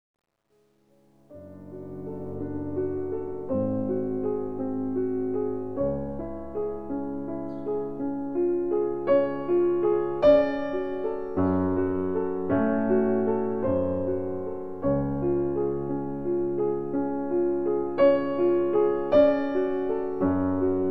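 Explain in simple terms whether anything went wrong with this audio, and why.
The fade-in from 0 to 2.35 s has truncation distortion. Its quietest stretch, up to 1.31 s, sounds gritty instead of smoothly swelling, which fits a fade computed at about 11 bits with no dither.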